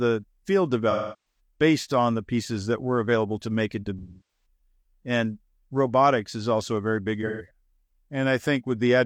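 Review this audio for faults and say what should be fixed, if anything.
AAC frame loss with concealment occurs at 0.90–1.40 s, before "based on the pieces". It recurs at 3.99–4.46 s, after "available to make it". It recurs again at 7.26–7.48 s, after "also a very big". The decoder fills each gap from the last good spectrum, leaving a smeared, noisy patch. Protect the stream with forward error correction or retransmission.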